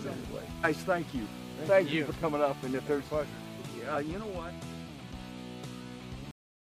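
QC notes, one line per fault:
0.63, 2.09–2.11, 3.95–3.97, 5.64 s: compressed frames skipped. At each point, whole compressed frames went unplayed, either missing from the file or rejected by the decoder as damaged, so the audio jumps forward. The first skip loses about a tenth of a second, the middle two about 50 ms each, and the last about 20 ms. The loss sizes fit frames of about 23 ms. Each join is audible as a short discontinuity where the material on either side of the gap is butted together.
6.31 s: cut-off end. The sound stops abruptly mid-event and drops straight to silence, with no natural decay, and stays silent for the remaining fraction of a second. This happens because the final buffers were never written or played out, so whatever was sounding at that moment is simply truncated rather than allowed to finish.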